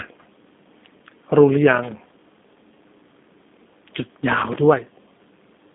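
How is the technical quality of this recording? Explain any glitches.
The quality is limited by plainly audible low-bitrate telephone coding across the whole recording.

G.729 codec damage runs throughout. The band sits at roughly 200 Hz to 3.6 kHz with nothing above 3.8 kHz, so the speech sounds muffled. It is rebuilt from a vocal tract filter, a pitch predictor and a few pulses per short frame, giving a plainly rough, synthetic texture that fits an 8 kbit/s stream.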